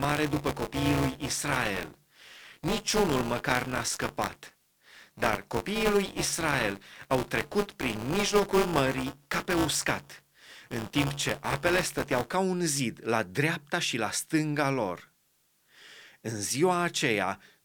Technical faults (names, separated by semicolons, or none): buffer tearing